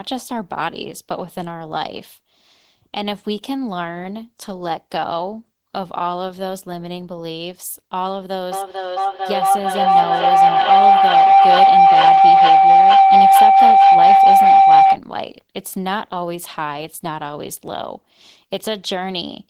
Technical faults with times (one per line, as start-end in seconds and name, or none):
8.52-15.02 feedback howl